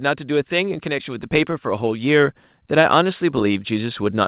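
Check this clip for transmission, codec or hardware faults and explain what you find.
One fault is present: automatic gain rising, from 0.05 s to the end of the clip at 4.28 s. The speech and the background noise grow louder together, steadily and without any sudden step, across the whole clip. The automatic gain control judged the incoming level too quiet and kept raising its gain slowly, so everything it passed was lifted together. Separately, the audio has nothing above 4 kHz, which fits G.711 mu-law telephone coding on the call path.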